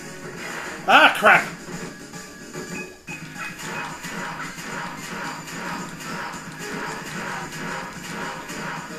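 From 1.15 s to 8.83 s there's a steady run of periodic USB or driver dropouts, one every 0.124 s, about seventy in all. Each time something stalls the bus or driver, roughly a millisecond of audio is simply skipped, leaving regular little ticks riding on the sound.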